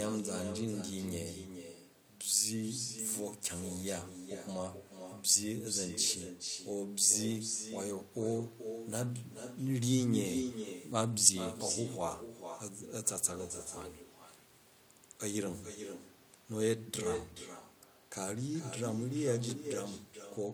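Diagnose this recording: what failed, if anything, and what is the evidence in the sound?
Call processing failed: echo with no canceller, present for the whole recording. Every stretch of speech is followed roughly 0.4 s later by a thinner copy about 8 dB down. The far end's loudspeaker feeds its microphone, and nothing subtracts that returned signal.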